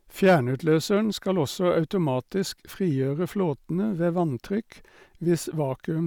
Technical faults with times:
0.23-0.36 hard clipping

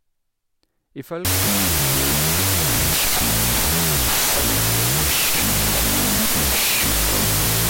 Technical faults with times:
1.25-7.70 wrong sample width

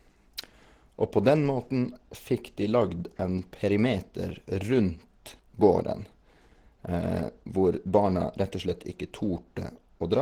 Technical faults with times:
0.00-10.22 Opus compression

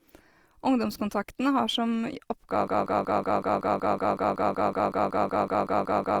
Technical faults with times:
0.00-6.20 Opus compression
2.68-6.20 broken-record loop

